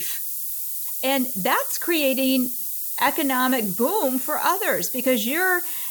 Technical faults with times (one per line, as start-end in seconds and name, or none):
0.00-5.90 low bit depth with noise shaping